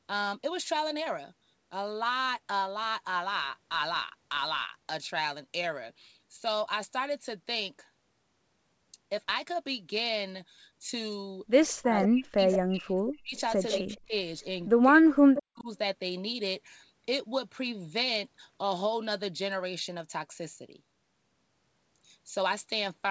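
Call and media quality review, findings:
Speech suppressed in double talk. The level dips hard, about 40 dB at worst, in four spans: 11.8–12.4 s, 12.59–13.36 s, 13.8–14.13 s and 14.85–15.69 s. Each dip lands while the far side is also talking. The likely cause is the echo canceller's suppressor. It cannot tell near speech from loudspeaker echo, so it attenuates both.

Echo leak. A delayed copy of the speech comes back about 158 ms late and about 10 dB under the direct signal. It appears in short scraps at 12.03–12.08 s, 12.52–12.57 s, 13.71–13.98 s and 15.36–15.43 s, inside the same double-talk stretch. The likely cause is residual loudspeaker pickup that the loudspeaker side's canceller failed to remove, which then gets sent back. The band stops at 8 kHz, as expected for the G.722 path.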